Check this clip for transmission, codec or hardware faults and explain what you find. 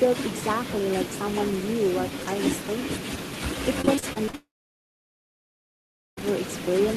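Three faults are present: an uncancelled echo across the whole recording, a burst of repeated packet loss, and a long dropout immediately after it.

Echo with no canceller runs throughout. Every part of the speech returns roughly half a second later, about 19 dB below the original, thinner than the direct sound. The far end's loudspeaker output is reaching its microphone, and no echo canceller removes it, so the talker's own audio comes back after the network round trip.

Repeated packet loss (robotic sound) occurs from 3.81 to 4.35 s. Seven separate gaps fall in that half second, the longest 41 ms, and concealment covers about a third of the span. The receiver patches each hole by extending the last sound, but the next loss follows quickly. The speech becomes choppy, with small pieces missing.

A long network dropout follows, from 4.35 to 6.23 s. The concealed tail of the last sound fades quickly. 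About 1.7 s of silence follows before the audio resumes, with the intervening speech gone. The likely cause is a stall in which no packets reached the receiver for nearly two seconds. The concealment could only hold the last sound briefly before giving way to silence.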